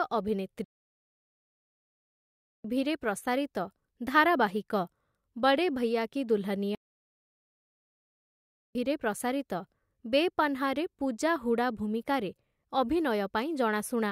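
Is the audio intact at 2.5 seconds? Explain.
No, the speech cuts out into silence from 0.64 to 2.65 s, a playback stall of 2 seconds, likely because the player ran short of data before resuming.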